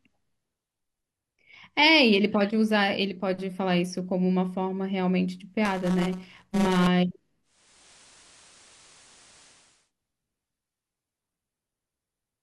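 From 5.65 to 6.87 s the speech takes on a robotic buzz at 188 Hz. This is buffer tearing. Writer and reader of the audio buffer have slipped. A small slice of each period holds sound from a lap earlier, with hard joins, which fits a 256-sample buffer.

From 7.43 to 9.92 s there is digital radio blending to analogue. The digital signal dropped, and the receiver cross-faded over 500 ms to the FM broadcast and later back. Hiss rises to roughly 30 dB below the speech. Level shifts by about 1 dB.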